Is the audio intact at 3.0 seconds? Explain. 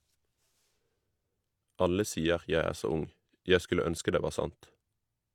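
Yes, at 3.0 seconds the speech plays through intact, with no dropout, click, distortion or other audible fault at that point.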